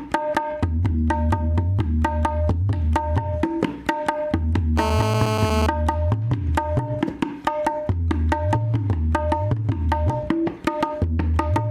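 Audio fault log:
4.78 to 5.67 s, GSM phone buzz: a hard, raspy buzz at 217 Hz, about 2 dB below the signal and steady across its span, as a phone on a call gives. The rectified radio bursts give it dense harmonics, unlike smoother 50 or 60 Hz mains hum.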